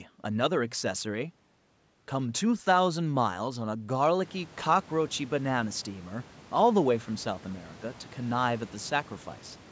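Nothing in this speech points to a technical fault.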